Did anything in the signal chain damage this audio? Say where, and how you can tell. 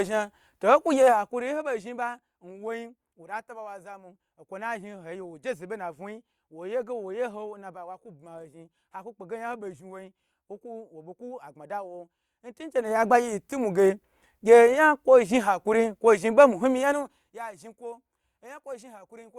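Yes. During the level moves at 1.06 to 1.68 s, 12.48 to 13.12 s and 16.82 to 17.5 s, a fine ticking zipper noise rides on the speech. Each move shifts the level by around 15 dB, down, then up, then down again. This is a gain stage at the driver or buffer level stepping the level in increments of about 1 dB or less, roughly 50 times a second, with no smoothing between steps, which fits one step per 20 ms buffer.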